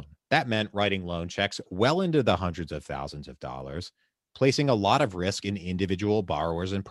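Nothing in this short speech recording sounds technically wrong, so there's really nothing to flag here.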